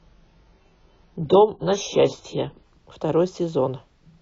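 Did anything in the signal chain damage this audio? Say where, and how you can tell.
Yes: an adaptive stream starting at a low bitrate, from 0.0 to 2.72 s, at the codec and playback stage. The speech is dull and smeared until the player steps up to a better rendition. The thin, artefact-heavy start fits AAC-LC near 16 kbit/s, and the sudden, gapless improvement fits a switch to about 96 kbit/s.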